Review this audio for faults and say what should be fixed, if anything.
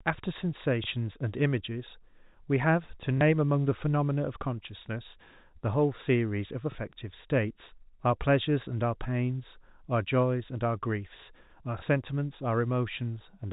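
Packet loss with the last packet repeated occurs four times, at 0.84, 3.18, 6.72 and 11.79 s, each lasting 30 ms, which fits a single lost packet of that size. The receiver replays the previous chunk, and because the repeat ignores pitch period, each repeat sounds like a small blip. A silent dropout would leave a gap instead. The narrow telephone band of the G.711 coding stays intact around each event. A larger jitter buffer with proper loss concealment would prevent it.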